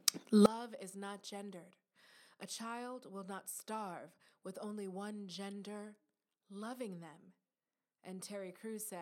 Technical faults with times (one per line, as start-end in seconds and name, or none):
0.46-9.01 one channel inverted